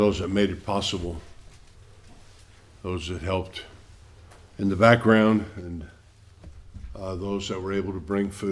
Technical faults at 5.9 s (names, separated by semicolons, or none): none